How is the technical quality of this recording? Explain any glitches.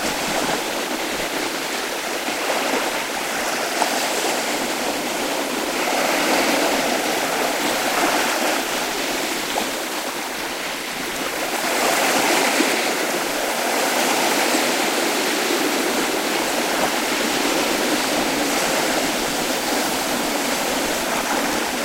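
The recording has one clear glitch, a doubled audio track running from 11.71 s to 21.07 s. Over that stretch a second copy of the sound plays about two seconds behind the first, roughly 5 dB quieter, full-band and dry, with no decay or room colour. It switches on and off abruptly, most likely because the signal was captured again through a slower path. On a waveform, each event reappears about two seconds later at lower amplitude. A spectrogram shows the same patterns repeated, shifted sideways, with hard vertical edges where the copy begins and ends.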